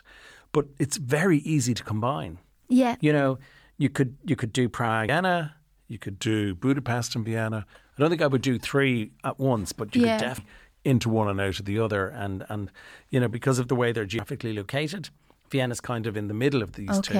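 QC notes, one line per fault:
2.50–4.87 s, drift correction step: right after "very easy to combine", speech runs 6.4% fast and about 107 cents sharp, then snaps back. This is likely a clock-matching resampler jump. On a spectrogram, the harmonics step up uniformly and then drop back.
5.09 s, compressed frames skipped: roughly 300 ms of speech is missing, about three frames of 92.9 ms each. The waveform shows a sudden envelope discontinuity with no silence gap.
6.16–7.69 s, drift correction step: after "you could", speech runs 6.4% slow and about 114 cents flat until "I don't think I". This is likely a buffer-refill rate change. On a spectrogram, the harmonics shift down as a block and the syllables stretch.
10.38 s, compressed frames skipped: after "but you yeah could", roughly 400 ms is gone, about four 92.9 ms frames. The spectrogram shows a vertical seam where the formant tracks jump.
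10.94–11.76 s, drift correction step: speech plays 6.4% slow and about 114 cents flat, then returns to normal. This is likely a clock-drift correction. On a spectrogram, the harmonic stack steps down and later steps back up.
14.19 s, compressed frames skipped: roughly 200 ms is dropped, about two 92.9 ms frames. The spectrogram shows a seam with abruptly mismatched formants.
14.70–15.82 s, drift correction step: speech runs 6.4% fast and about 107 cents sharp, then snaps back. This is likely a resampler step to drain a buffer. On a spectrogram, the harmonics rise together and the syllables compress in time.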